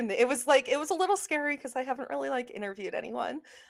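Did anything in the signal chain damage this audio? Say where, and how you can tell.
No, nothing in the signal chain damaged this audio.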